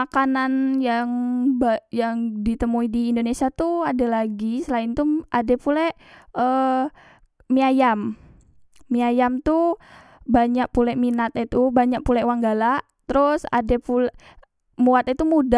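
Nothing stood out as a technical fault when listening to this speech recording.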